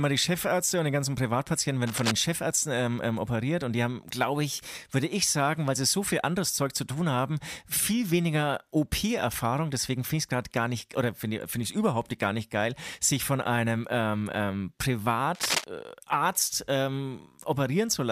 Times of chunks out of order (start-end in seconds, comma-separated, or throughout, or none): none